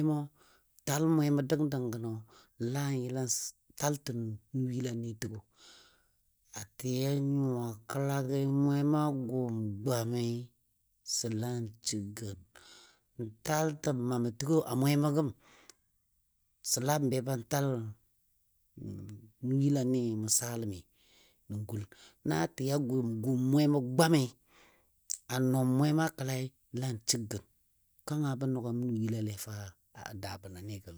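Software likely stretched the speech between 6.20 and 14.06 s to fill a longer slot, running it at about 0.6 times normal speed while holding pitch by repeating short slices. This time-stretched section abruptly slows in pace, its pitch unchanged, and drags.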